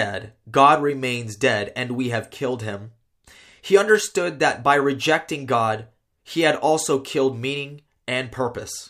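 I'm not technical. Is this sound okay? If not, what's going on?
Yes, nothing stood out as a problem when I listened to this recording.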